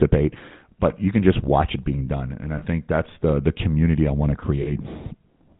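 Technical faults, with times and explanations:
Throughout, GSM full-rate codec: the speech has a plainly audible buzzy, gravelly roughness and nothing above 4 kHz, so sibilants and upper harmonics are dulled. The codec rebuilds speech from a vocal-tract model driven by a sparse, regularly spaced pulse excitation that keeps only one sample in three. That coarse excitation is what gives the grain. The bandwidth and texture fit the 13 kbps full-rate mode.
2.58–2.63 s and 4.62–4.68 s, lost GSM frames: at 2.58 s, after "being done and i" and before "that's the the community", and at 4.62 s, after "community i want to", the sound briefly freezes into a rough, metallic ring lasting about 40 ms. Each gap is consistent with two missing frames. The decoder fills them by repeating the last good frame's parameters, so a held, ringing copy replaces the missing speech.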